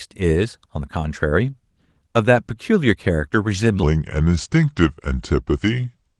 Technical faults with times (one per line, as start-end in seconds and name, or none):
3.83-6.20 section at the wrong speed